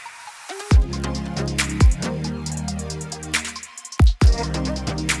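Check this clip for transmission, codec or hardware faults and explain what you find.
There's one fault, running the whole way through. Resampler restarted on every block: each 20 ms chunk gets converted on its own (sounds like 48 kHz down to 24 kHz), so edges glitch, giving a 50 Hz buzz under the sound.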